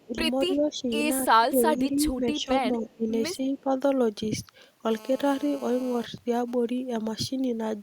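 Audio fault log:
0.06–0.18 s, 0.47–0.9 s, 1.21–3.08 s and 3.54–3.72 s, speech suppressed in double talk: the talker's level sags in pieces, by up to about 15 dB, across the longest stretch. It's likely an echo canceller that couldn't tell the talker from loudspeaker echo and pulled both down.
2.9–2.95 s and 3.43–3.61 s, echo leak: faint scraps of a delayed copy of the speech, trailing it by 265 ms and sitting very low, around 35 dB under the main signal. That's likely far-end loudspeaker pickup that the echo canceller didn't fully remove.
4.91–6.06 s, GSM phone buzz: a hard, raspy, steady buzz at 217 Hz with lots of harmonics and no connection to the speech, about 20 dB below it. A nearby 2G phone in a call is bursting, and the audio circuitry rectifies those radio pulses.
6.18–6.9 s, GSM signalling bursts: even ticks with a longer 217 Hz buzz twice a second, quieter at roughly 30 dB down. 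A nearby 2G phone is now sending only sparse bursts while its user is silent, and they get rectified in the same way.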